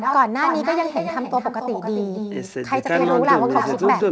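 Echo with no canceller runs through the whole speech clip: the far end's loudspeaker feeds its microphone and nothing strips that out, so every phrase returns roughly a third of a second later, about 6 dB down and thinner, over audio that stops at 8 kHz.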